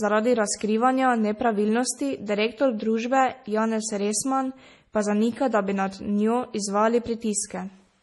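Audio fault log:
throughout, MP3 compression: heavily watery, swirly speech with nothing above 11.5 kHz, likely from a low-bitrate encode near 32 kbps discarding quiet frequency detail.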